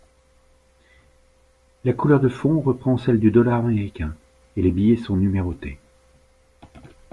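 Nothing stood out as a technical fault on listening to this speech recording.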